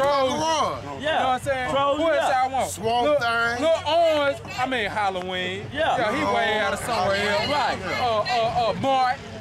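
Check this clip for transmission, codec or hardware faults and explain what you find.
Two loud pops: a double pop at 4.17–4.30 s, roughly 10 dB above the audio, and a single pop at 5.22–5.24 s, about 5 dB above. Each is likely a voltage step, from a plug, switch, static or driver glitch, added over the continuing sound.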